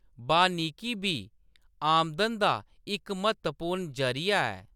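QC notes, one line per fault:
No faults heard in the speech clip. Nothing here needs a QC entry.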